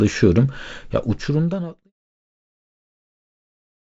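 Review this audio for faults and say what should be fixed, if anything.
Nothing should be fixed, as there are no faults in this audio.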